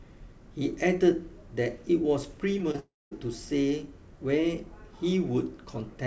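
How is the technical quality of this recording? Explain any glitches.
The recording has a cluster of glitches just before the three-second mark: three brief concealed losses and then a longer dropout. It travelled over a call link, with no content above 8 kHz, which fits the wideband G.722 codec at 64 kbps.

Short concealed packet loss occurs at 2.58 to 2.61 s, 2.71 to 2.76 s and 2.76 to 2.80 s. In each case about 20 ms of audio arrived too late to decode. The receiver bridged each hole by extending the preceding sound and then blending back into the real audio. This is heard as quick smears or wobbles.

A long network dropout follows from 2.80 to 3.13 s. Its likely cause is an interruption in packet delivery lasting about a third of a second. The receiver first carried the last sound on as a fading buzz or hiss. Roughly the final 0.22 s of the gap is then near-silent before the audio resumes, with the lost 0.32 s missing.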